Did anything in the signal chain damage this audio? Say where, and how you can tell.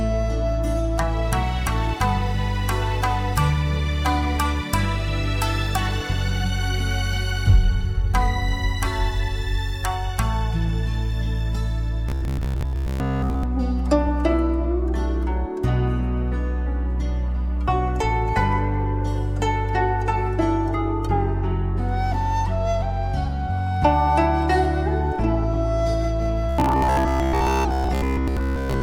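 Yes. Robotic sound from repeated short buffers appears at 12.09 to 13.43 s and again at 26.49 to 28.82 s. In both spans a rigid, metallic buzz at 66.8 Hz is imposed on the sound. This likely comes from the driver or buffer stage, where audio arrived too late and each gap was filled by repeating the last 15 ms. Roughly 70 percent of each span is repeated material, and the real audio there is lost.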